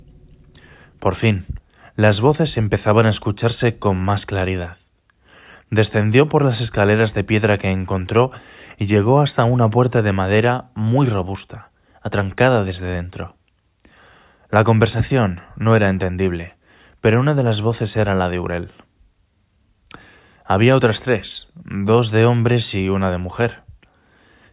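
Nothing stood out on listening to this speech recording.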